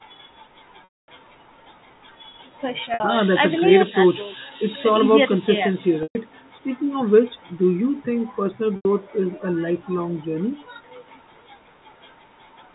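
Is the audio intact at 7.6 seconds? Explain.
Yes, the speech at 7.6 seconds is intact, with nothing at that moment beyond the ordinary band limiting of the call's microphone processing and G.711 telephone coding.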